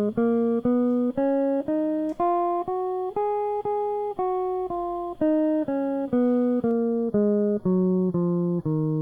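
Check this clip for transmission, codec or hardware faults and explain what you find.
One fault appears in this music clip. From 6.71 s to the end, channel delay (comb filtering): one channel lags by about a fifth of a millisecond, so the mono sum cancels near 3 kHz and at evenly spaced frequencies above, sounding hollow rather than simply dull like a low-pass filter.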